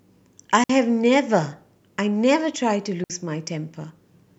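Speech with two digital wireless dropouts, at 0.64 s and 3.04 s, each a 60 ms clean hole of near silence where the receiver mutes after losing data. On a waveform they appear as flat gaps; a spectrogram shows blank vertical strips without noise bursts at either edge.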